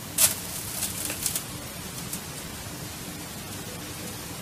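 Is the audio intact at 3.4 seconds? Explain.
Yes, the sound is intact at 3.4 seconds, with no audible fault at that moment.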